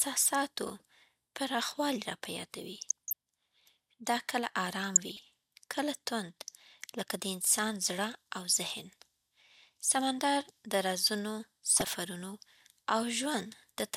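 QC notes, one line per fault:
2.81–3.13 s, 4.96–5.19 s and 11.65–11.87 s, DAB burbling: weak reception leaves bit errors, a few tenths of a percent, that slip past error correction into the MP2 stream. Corrupted samples put short blips of noise in single sub-bands, and corrupted scale factors make sub-bands jump in level for up to a frame. The speech gets short bursts of burbling noise, in the middle burst right after "دا کله ارام" and before "کله توند". The bursts hit ten to eighteen damaged frames each.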